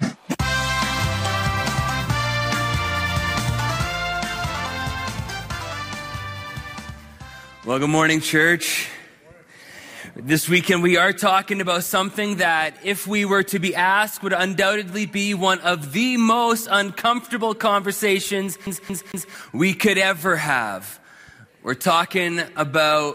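CD stuck on one turn, from 18.67 to 19.35 s: a scratch on the disc kicks the laser back by one track each time the spot comes round, so the player keeps rereading the same stretch instead of moving on. Here a piece of sound about 0.23 s long plays three times in a row, each restart marked by a brief mute, giving the quick, evenly spaced stutter typical of a skipping CD.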